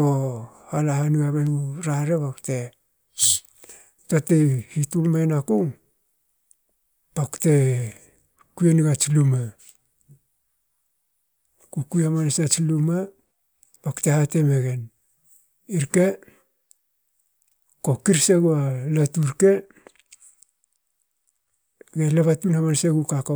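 No technical faults can be heard anywhere in the speech recording. There is nothing to mark at any point along its timeline.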